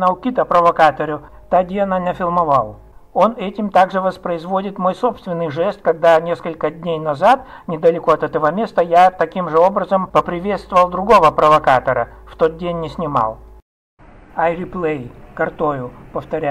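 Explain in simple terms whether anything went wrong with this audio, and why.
Nothing went wrong with this audio that a careful listener can pick out. No moment in the recording stands out as a technical problem.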